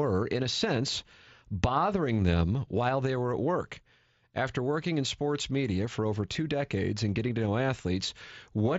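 A brief concealed Bluetooth headset packet loss hits this speech clip at 6.33 s, between "sports media for over" and "decades and getting to". About 15 ms of headset audio went missing, which fits two lost mSBC frames. The receiver filled the gap by repeating a closely matching stretch of the preceding waveform. The mSBC wideband link itself is working, limiting the audio to 8 kHz with light codec graininess.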